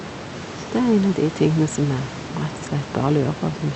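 No technical fault can be heard: the speech sits about 14 dB above a room noise, and its top end stops near 8 kHz, as expected for a call carried over Opus.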